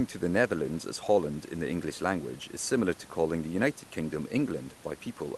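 This speech clip shows no technical faults: the call path behaves as an Opus call at 32 kbps should, with the audio band reaching about 12 kHz, and the room's background noise sits about 26 dB below the speech.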